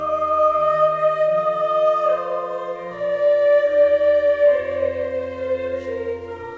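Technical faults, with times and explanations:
No technical faults heard.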